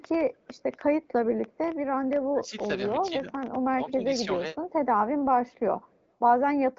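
Speech over an AMR wideband (HD Voice) link, band-limited to about 7.6 kHz, with two distinct faults. An echo leak sits at 0.34–0.61 s, 5.51–5.57 s and 5.84–6.05 s: a very faint copy, some 40 dB down, trailing the talker at a fixed 212 ms. That constant lag separates it from room reverberation, which smears rather than repeats; the likely cause is a loudspeaker-side echo canceller letting residue through. Speech suppressed in double talk follows at 2.32–2.66 s, 3.09–3.37 s and 3.70–4.05 s, where the talker's level sags by about 10 to 15 dB for a few hundred milliseconds, likely from an echo canceller ducking the talker while the far end spoke.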